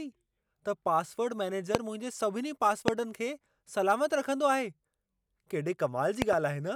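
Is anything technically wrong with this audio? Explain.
Yes. Loud pops occur at 1.75 to 1.77 s, 2.88 to 2.90 s, and as a double pop at 6.22 to 6.35 s. Each is a sharp burst far above the speech. The speech continues underneath. The likely cause is a sudden voltage pulse, such as static or a switch.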